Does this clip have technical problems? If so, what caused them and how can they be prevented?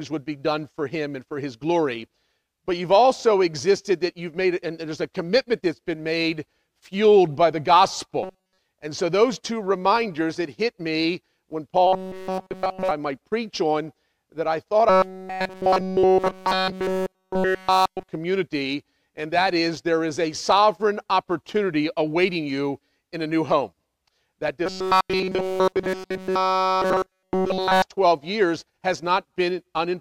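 Yes. Robotic sound from repeated short buffers occurs at 8.23 to 8.58 s, 11.87 to 12.91 s, 14.89 to 18.09 s and 24.66 to 27.82 s. In each stretch the audio becomes a rigid metallic buzz at 188 Hz. The likely cause is that new audio arrives too seldom, so the playback side loops a fragment of roughly 5.3 ms, a period that matches the 188 Hz buzz. Nearly all of the real sound is skipped. Preventing it means giving the audio thread enough priority and buffer headroom that fresh data always arrives before the current block runs out.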